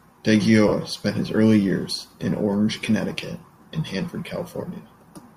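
From 0.68 to 0.72 s, just before "spent his early years", lost LE Audio frames leave a gap of about 37.5 ms, which fits five 7.5 ms frames. The decoder repeats the last spectrum with scrambled phase, so the sound briefly turns into a grainy smear. On a spectrogram, harmonic lines break into diffuse noise for that span, and the waveform loses its periodic shape.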